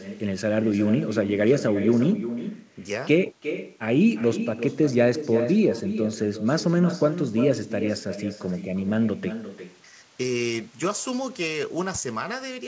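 Throughout the speech, echo with no canceller returns every phrase roughly 0.4 s later, about 10 dB quieter, as a distinct thin repeat rather than a smoothly decaying room reverb tail.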